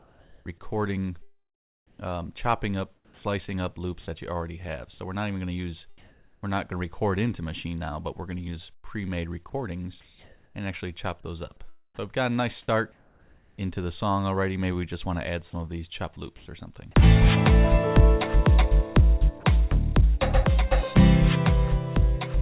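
Comfort noise in place of the background appears from 0.0 to 3.23 s, 5.98 to 6.43 s, 12.92 to 13.58 s and 16.37 to 16.46 s. The cause is likely discontinuous transmission: the sender's voice detector judged these stretches silent and stopped sending, and the receiver filled them with synthetic noise. The real background, lying about 39, 33 and 32 dB below the loudest sound in the later three gaps, gives way to a flat, featureless hiss. The level shifts by about 7 dB at 6 s, about 4 dB at 13 s and about 2 dB in the other direction at 16.4 s. In the opening stretch, roughly 0.85 s in total is synthetic.

Sound chopped by the voice detector occurs between 8.75 and 10.55 s. Here the detector likely switched transmission off and on several times, replacing about 0.66 s of quiet material with comfort noise. The result is choppy, with holes in the sound, heard through the band-limited call sound with nothing above 4 kHz.

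Sound dropped by the voice detector occurs at 19.4 s. A 30 ms fragment of quiet sound was likely mistaken for background and not sent. Comfort noise takes its place, leaving a tiny nick where the sound briefly becomes steady noise before transmission resumes.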